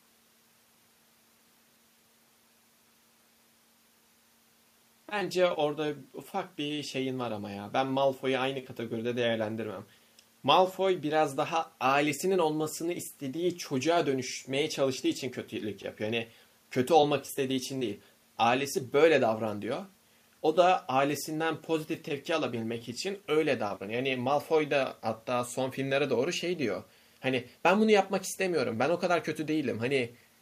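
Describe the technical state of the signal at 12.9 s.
At 12.9 s the signal is intact, with no audible dropout, clipping, distortion or other technical fault.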